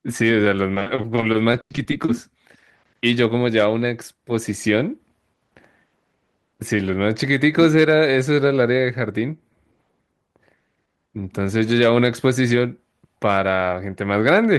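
From 0.74 to 2.09 s the speech turns choppy, with pieces dropping out. This is repeated packet loss: brief gaps, none over 100 ms, arrive in quick succession, each patched by extending the preceding sound, concealing about 30% of that stretch.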